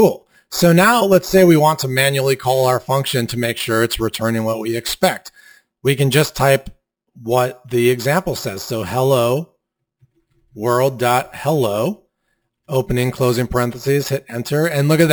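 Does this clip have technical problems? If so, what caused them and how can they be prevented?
Yes. Imaging from sample-and-hold upsampling runs throughout: the rate went from 12 kHz to 48 kHz by repeating samples without smoothing, so mirrored spectrum copies appear, the first spanning 6 to 12 kHz at about -17 dB, adding metallic fizz. Prevent it by resampling with a proper interpolating low-pass filter.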